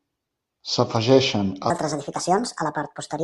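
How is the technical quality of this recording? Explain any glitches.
The recording has one clear fault. From 1.70 s to the end at 3.23 s, the speech runs at the wrong sample rate: it plays 1.5 times too fast and about 7 semitones high, a rise of roughly a fifth, so it sounds hurried and chipmunk-like. That ratio fits audio captured at 32 kHz being played back at 48 kHz with no conversion. Speed and pitch rise together by the same factor, unlike a pitch shifter or a time-stretch, which would change only one.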